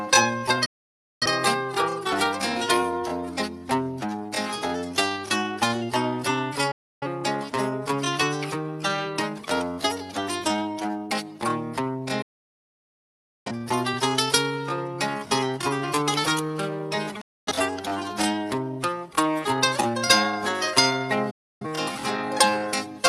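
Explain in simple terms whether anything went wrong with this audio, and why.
Digital broadcast dropouts at 0.65, 6.71, 12.22, 17.21 and 21.30 s: the receiver lost the signal or got damaged data, so it muted, fading out in about 8 ms. Roughly 0.3 to 1.2 seconds of sound is missing each time, and it never comes back.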